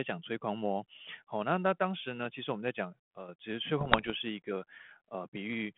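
From 3.80 to 4.11 s the speech breaks into pops and rough bursts, with brief jumps in level. These are bit errors on an ADPCM link. Flipped bits upset the decoder's step size and predictor, so each error rings on briefly. The error rate is roughly one percent.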